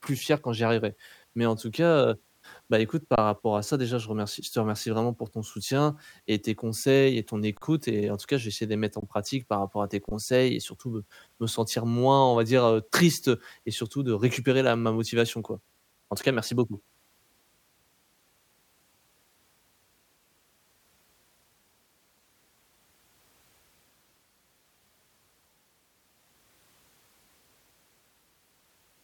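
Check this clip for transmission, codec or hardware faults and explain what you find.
The speech is interrupted four times by an underrun with held sample, at 3.16 s, 7.57 s, 9.00 s and 10.09 s. Each time the playback buffer ran dry and the converter froze on its last output value. The waveform flattens at that level rather than dropping to zero, so the speech simply stops for about 21 ms, or 43 ms at 7.57 s, with little or no click at the onset. The lengths fit one or two 1024-sample buffers. No audio was skipped, so playback resumes where it paused, with only a soft step.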